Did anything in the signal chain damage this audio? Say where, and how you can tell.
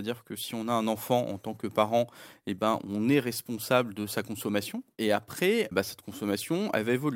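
No, nothing along the signal chain has left a mark on this speech that I can hear, so there's no stage to point to.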